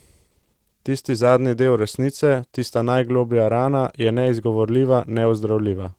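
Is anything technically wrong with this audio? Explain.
Yes. Throughout, Opus voice compression at a low bitrate, fitting roughly 16 kbps, codes the speech coarsely with SILK plus a thin CELT top layer, leaving it plainly hoarse, muffled and slightly robotic.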